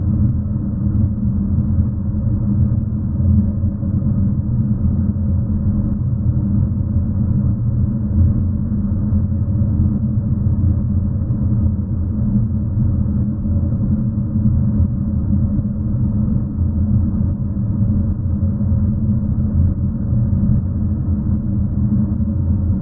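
No technical faults can be heard anywhere in this audio.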